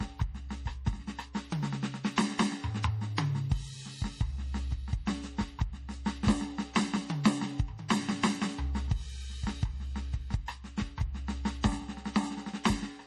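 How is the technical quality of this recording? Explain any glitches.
The recording is a music clip whose quality is limited by heavy lossy coding, with two short pre-echo smears.

Throughout, the sound is watery and swirly, with chirpy, metallic highs and nothing above 14.9 kHz, the likely result of MP3 compression at a low bitrate, around 40 kbps. The starved encoder drops weak frequency lines, which flicker between frames. A spectrogram shows a hard ceiling and speckled gaps.

At 7.24 s and 7.88 s, pre-echo puts a short hiss about 16 and 18 ms ahead of sharp attacks, softening them. The codec spreads noise across the whole block, so it fills the quiet before each onset. A waveform shows a small fuzzy lead-in before each transient.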